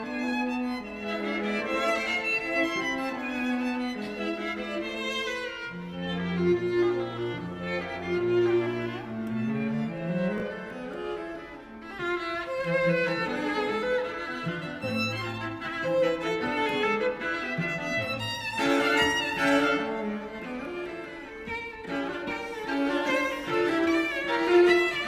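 At 10.38 to 10.42 s, chunks out of order: one 20 ms chunk plays a chunk late, leaving three hard joins heard as a brief jumbled moment.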